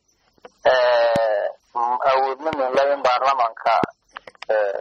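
Loud pops land at 1.16–1.18 s, a double at 2.53–2.77 s, and 3.84–3.86 s, each jumping well above the sound, which carries on underneath. The likely cause is a voltage spike from a plug, switch, static or driver glitch, heard as sharp thumps.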